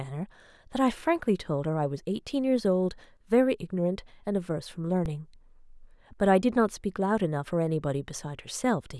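At 5.05 s and again at 6.42 s the speech drops out in an underrun with held sample. The output buffer ran dry, so the converter held its last value for about 8 ms and then about 11 ms, the second gap lasting 256 samples. On a waveform each appears as a short flat line; a spectrogram shows a thin blank column. Roughly that much audio was lost while the output was held.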